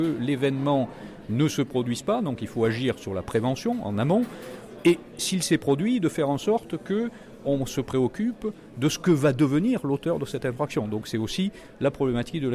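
Nothing technically wrong is audible anywhere in the audio.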